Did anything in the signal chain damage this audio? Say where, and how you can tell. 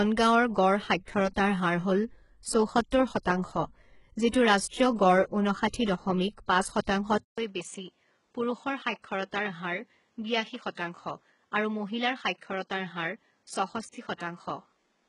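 Yes. At the codec stage, heavy damage throughout, with nothing above 11.1 kHz and replicated treble: likely HE-AAC compression, consistent with a bitrate around 12 kbps.

Pre-echo, also from the codec: hiss smears ahead of attacks at 1.05 s after "গাঁৱৰ গড়" (26 ms), 4.29 s (42 ms), and 6.84 s after "ঊনষাঠি দশমিক পাঁচ" (28 ms).

At 7.18 s, after "ঊনষাঠি দশমিক পাঁচ", a 200 ms silence occurs. The band then stops at 9 kHz, level drops about 5 dB, and new noise sits roughly 40 dB down. This is likely the input switched to a poorer device.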